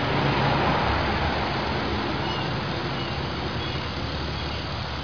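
No technical faults can be heard anywhere in this audio.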